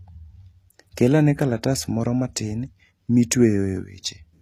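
A speech recording with plainly audible codec damage from start to finish. The treble sounds bright but synthetic, and s sounds come out gritty and lispy. Nothing sits above about 14.9 kHz. The likely cause is HE-AAC compression, rebuilding the top band from copied lower bands, which fits a rate near 24 kbps.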